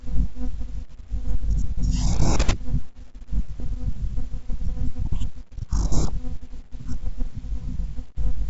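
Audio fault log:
3.60–3.62 s, bit errors on an ADPCM link: a brief rough pop and level jump, as flipped bits disturb the G.722 decoder's step size and predictor.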